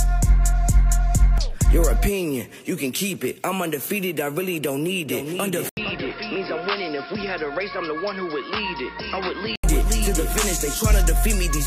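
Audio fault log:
5.69–9.64 s, input switched to a poorer device. An 80 ms silence comes first. Then the sound turns dull and boxy, with nothing above 5.4 kHz. It drops about 10 dB and gains faint new background noise. The likely cause is a change to a narrower-band input.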